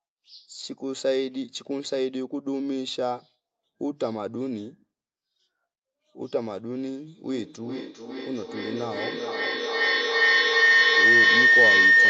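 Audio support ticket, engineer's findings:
Feedback howl from 7.29 s to end: tone near 2 kHz, loop repeating roughly every 0.4 s, peaking about 11 dB over speech. Two devices in one room on the call; mic-to-speaker loop gain above unity.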